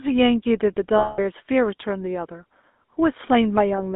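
Speech, heard through the GSM full-rate codec throughout. The band runs only from 250 Hz to 3.6 kHz, and the voice has a plainly buzzy, gravelly roughness that fits a 13 kbps codec. From 0.98 to 1.19 s there are lost GSM frames. The last good sound is held for 200 ms as a rough, metallic ring, which points to about ten concealed frames.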